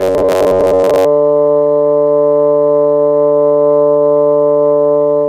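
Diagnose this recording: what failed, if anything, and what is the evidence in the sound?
From 0.01 s to 1.06 s the music collapses into robotic sound from repeated short buffers: a rigid, metallic buzz locked at 93.8 Hz that loosely tracks the music underneath. A 93.8 Hz buzz means the same slice of roughly 10.7 ms is being replayed back to back, and most of that stretch is repeated rather than new material. The likely cause is at the driver or buffer stage: input arrived too slowly, and the software padded each gap by looping its last short block.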